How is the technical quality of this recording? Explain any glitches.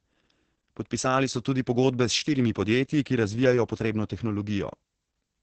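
Quality is poor: Opus voice compression has heavily degraded the whole speech recording. Running in its SILK linear-prediction mode, the coder restricts the band to wideband and codes the excitation very coarsely, at a rate that fits roughly 10 kbps. Nothing remains above 8.7 kHz, so from start to finish the speech sounds muffled, hoarse and slightly robotic.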